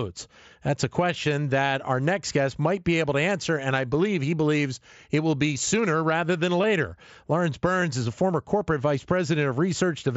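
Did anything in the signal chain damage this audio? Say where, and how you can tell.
Yes, concealed Bluetooth headset packet loss at 6.63 s and 7.81 s, on the wireless link between headset and phone. Each gap lasts about 7.5 ms, which fits one lost mSBC frame, and the receiver fills it by repeating a best-matching stretch of the preceding waveform. Both are nearly inaudible. A waveform zoom shows a short, suspiciously periodic segment with a slight phase seam where real audio resumes. On a spectrogram it appears as a hairline smear, with the codec's 8 kHz ceiling visible throughout.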